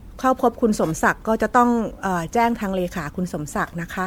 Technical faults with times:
0.00-4.06 generation loss

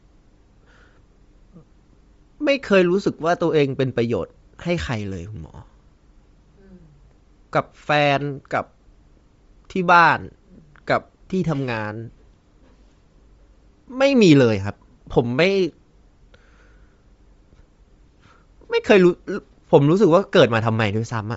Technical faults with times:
0.00-21.37 Bluetooth LC3 compression

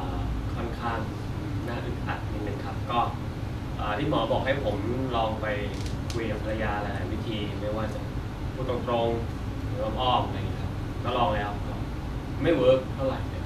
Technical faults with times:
none

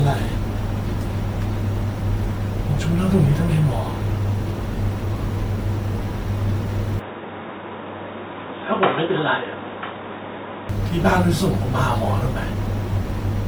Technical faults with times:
0.00-13.47 generation loss
6.99-10.69 input switched to a poorer device

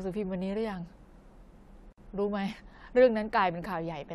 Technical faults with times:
1.92-1.98 gap at a join of encoded pieces

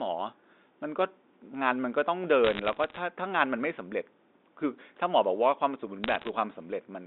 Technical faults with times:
2.44-2.99 bit errors on a digital phone line
6.04-6.29 bit errors on a digital phone line

